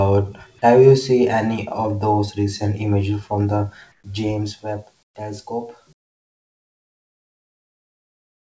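A USB whine runs through the whole speech clip: a fixed 8 kHz tone, about 20 dB below the signal, from the bus's 125-microsecond microframe current leaking into the audio supply or ground. On a spectrogram it is a thin, unbroken horizontal line sitting right at the top edge, where the call codec's band ends at 8 kHz.

Comfort noise in place of the background then appears three times, likely from the sender's discontinuous transmission. The receiver fills each pause with smooth synthetic hiss instead of the real room sound. This happens for 120 ms at 3.92 s, about 3 dB down; for 120 ms at 5.03 s, about 16 dB down; and from 5.93 s to the end, about 22 dB down. On the spectrogram these stretches look like flat, textureless grey blocks, and in the waveform they appear as a sudden drop to a low, even band.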